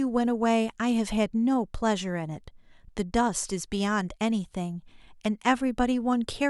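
No technical faults can be heard anywhere in the recording.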